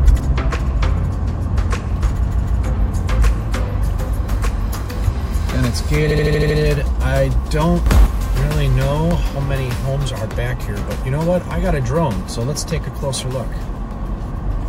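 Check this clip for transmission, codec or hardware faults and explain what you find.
Two kinds of fault are audible: repeated frames twice and one sudden gain jump.

Repeated frames at 2.26–2.58 s and 6.10–6.57 s: blocks of compressed frames were decoded again. A 156.7 ms block, which fits about six frames, plays twice more. Then a 78.4 ms block plays six more times. The result is a stutter, adding 313 ms and 470 ms.

Sudden gain jump at 7.86–8.06 s: the level, likely from a gain change applied without a ramp, shifts by about 7 dB, lifting sound and background noise together.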